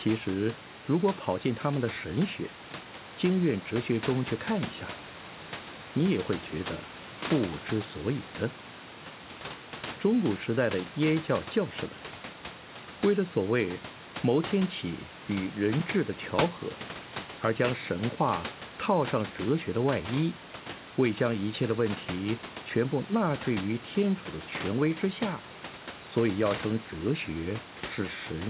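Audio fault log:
No faults are present: the speech sits about 15 dB above the room's background noise, and the call path that carries it, which fits a G.711 A-law link at 64 kbps, passes nothing above 4 kHz, as that narrowband codec is built to do.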